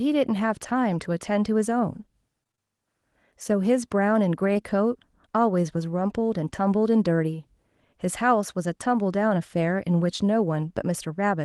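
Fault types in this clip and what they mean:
Repeated packet loss (robotic sound), 2.43 to 2.59 s: four holes, the longest 24 ms, were each patched by extending the preceding sound, so about half of this 0.16 s stretch is synthetic fill, giving a choppy texture with fragments of the speech missing.
Short concealed packet loss, 4.53 s: roughly 20 ms of audio arrived too late for the decoder, and the receiver papered over it by continuing the previous sound before blending back, heard as a brief smear or wobble in the speech.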